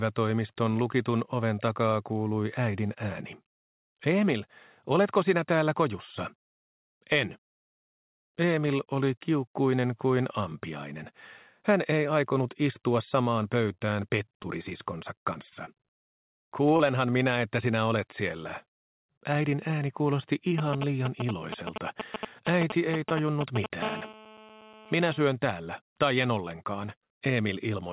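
Heard through a narrowband call path, with nothing above 4 kHz, consistent with G.711 mu-law at 64 kbps, the audio carries five distinct transmission and interference faults. At 13.74 to 13.85 s there is a short stall from a late packet: the jitter buffer ran dry, and the receiver stretched the preceding sound by about 23 ms until the packet arrived. Nothing is lost, but the sound hangs briefly with a faint buzzy dip, and playout delay rises by 23 ms. From 14.43 to 15.69 s, repeated packet loss gives a choppy, robotic texture. Six separate gaps, none longer than 23 ms, are each patched by continuing the last sound, adding up to about 80 ms of missing audio and roughly 8 percent of the stretch concealed. At 16.77 to 16.81 s a single short concealed packet loss removes about 20 ms, which is bridged with about 24 ms of extrapolated sound and heard as a quick smear or wobble. From 20.58 to 23.66 s come GSM signalling bursts, a galloping dit-dit-dit of brief buzzes at the 217 Hz frame rate, roughly as loud as the wanted sound. 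A nearby 2G handset negotiating with its network produces these pulses, and the audio circuitry rectifies them. From 23.82 to 25.25 s a continuous GSM phone buzz follows, a hard, harmonically rich 217 Hz rasp about 12 dB below the signal and unrelated to it.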